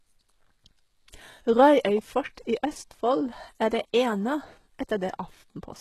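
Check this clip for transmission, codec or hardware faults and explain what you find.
There's one real problem, and it runs through the whole clip: the speech carries the marks of low-bitrate coding, most likely HE-AAC compression. Nothing comes through above about 12.3 kHz, and the damage is plainly audible. The top end sounds bright but synthetic, because only the lower spectrum is actually coded and the treble is patched back in by copying lower bands upward. That leaves s sounds gritty and lispy, which fits a bitrate around 16 kbps.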